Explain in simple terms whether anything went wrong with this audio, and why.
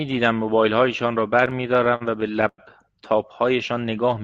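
Between about 1.45 and 2.60 s the speech keeps catching and dragging. These are repeated stalls (stutter): the audio arrived late over a dozen times, and the receiver stretched the last sound to cover each wait of up to 100 ms. Unlike dropouts, nothing is actually missing.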